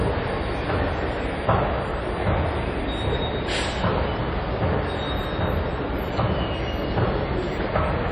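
Throughout, the sound has a ringing, washy smear, with hiss swelling and fading alongside the signal. The likely cause is heavy WMA compression at a low bitrate, around 32 kbps. A spectrogram shows blurred, blotchy transients and patchy gaps where weak components were zeroed.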